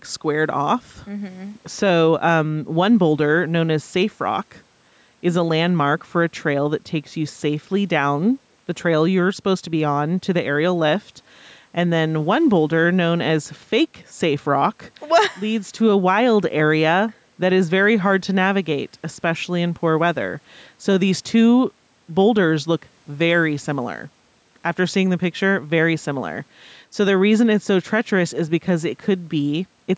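Listening through the speech, nothing stood out as a fault: the call microphone processing leaves nothing above 8 kHz, and the room noise sits about 43 dB below the speech.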